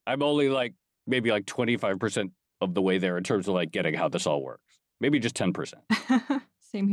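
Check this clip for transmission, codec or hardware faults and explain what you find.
Nothing here points to a transmission, codec or hardware problem; the speech comes through without any audible fault.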